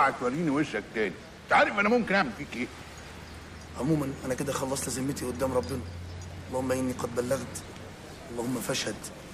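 No technical faults can be heard anywhere here.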